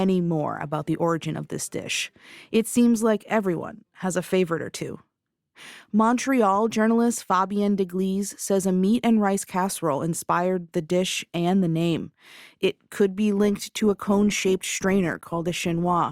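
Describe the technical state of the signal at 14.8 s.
At 14.8 s the speech is inside a stretch played as an adaptive stream at a lower bitrate, running from 13.43 s to the end. A slowed connection pushed the stream onto a cheaper encoding, which fits a step from 64 down to 24 kbit/s Opus. Codec artefacts rise audibly. The quality changes abruptly at 13.43 s with no gap in the waveform.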